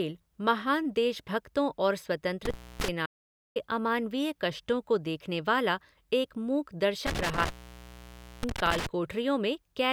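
From 2.45 to 2.88 s the speech cuts out with an intermittent contact fault: a loose plug or cable connection opens for about 263 ms, with crackle at each edge and only faint hiss underneath. An audio dropout to silence runs from 3.06 to 3.56 s, just before "अमानवीय कष्टों को देखने". For about 496 ms the signal is silent with no room tone, and the speech resumes mid-flow. The likely cause is a lost input, with the recorder writing silence. The intermittent contact returns from 7.07 to 8.87 s, right after "देखने वाला एक मूक", with the line open for about 931 ms, crackle at the edges and hiss between.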